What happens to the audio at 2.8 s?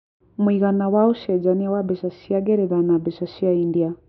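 Nothing goes wrong at 2.8 s: the speech continues there without any audible dropout, glitch or other fault.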